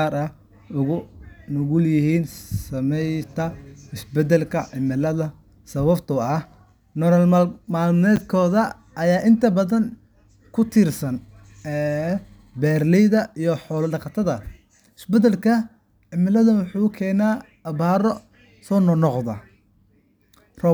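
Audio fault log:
8.16–8.18 s, chunks out of order: a 10 ms chunk of speech plays one chunk late, leaving three hard joins heard as a jumbled moment.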